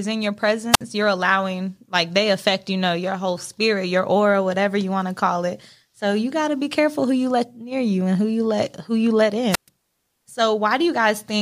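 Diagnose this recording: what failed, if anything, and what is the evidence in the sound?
The analogue FM radio link from the wireless microphone faded until the receiver's squelch muted the output: a wireless microphone squelch dropout. After "in your" (0.71–0.81 s), hiss rises into a 57 ms silent hole before "you're allowing like they". After "let who you let" (9.50–9.69 s), the hole lasts 126 ms.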